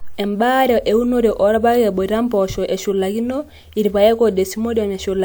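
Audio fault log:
No technical faults can be heard anywhere in the speech recording.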